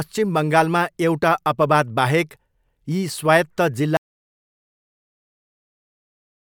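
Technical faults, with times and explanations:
3.97 s to the end: audio dropout to silence. The speech cuts off abruptly mid-flow and the remaining 2.6 s are silent with no room tone, likely because the input was lost while the recorder kept writing silence, so nothing after that point survives.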